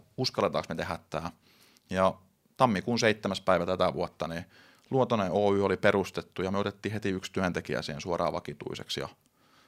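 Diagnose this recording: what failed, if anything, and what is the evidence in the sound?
Nothing in the signal chain has failed; the speech signal stays continuous and stable throughout, with no audible defect at any stage from capture to playback.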